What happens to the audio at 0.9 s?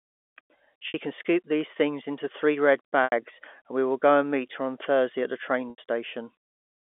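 Right around there, from 0.88 to 0.94 s, there's a packet loss with pitch repetition. About 60 ms of audio went missing, which fits three 20 ms packets. The receiver covered the hole by looping the last pitch period and fading it out, so you get a brief held buzz that sags toward silence before the speech cross-fades back in, all within the narrow telephone band of the G.711 line.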